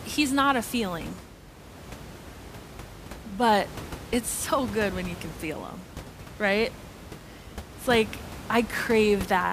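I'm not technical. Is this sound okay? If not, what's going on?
Yes, nothing stood out as a problem when listening to this recording, and the background noise of the room is simply part of where it was recorded.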